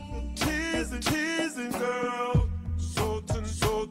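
No technical faults are audible.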